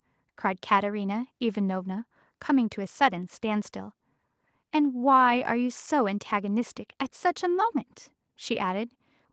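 No technical faults can be heard in the speech; the top end stops at about 8 kHz, as expected from the call microphone processing and the Opus codec on the WebRTC call path.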